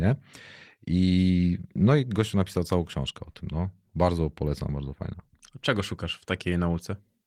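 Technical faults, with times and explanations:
No technical faults detected.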